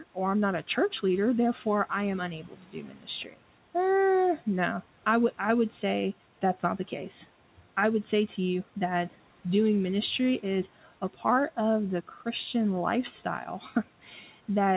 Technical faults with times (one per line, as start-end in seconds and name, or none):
2.48-3.35 speech cut by the noise suppressor
14.04-14.30 speech cut by the noise suppressor